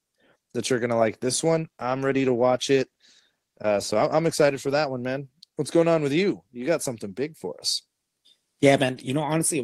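A call bitrate drop starves the encoder from 1.5 to 4.89 s, between "going to like this" and "one man", so speech turns coarse and muffled.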